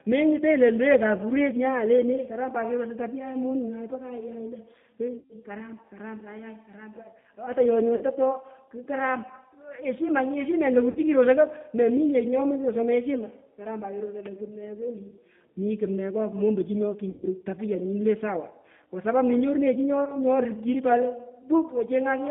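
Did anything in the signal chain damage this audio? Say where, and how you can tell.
Yes. At the codec stage, the whole clip carries G.729 coding at 8 kbit/s. The speech sounds rough and slightly synthetic, and the band runs from 150 Hz to 3.6 kHz. A spectrogram shows a hard ceiling with nothing above 3.6 kHz, plus coarse, grainy harmonic detail.

At the network stage, there is VoIP packet loss concealed by the speech codec at 5.18–5.36, 7.95–8.03, 10.91–10.98, 17.10–17.27 and 20.05–20.21 s. Gaps of 120, 60, 40, 120 and 20 ms suggest 20 ms packets. The decoder stretches the last pitch into buzz that fades. Spectrograms show frozen, smeared harmonics; waveforms show decaying envelopes.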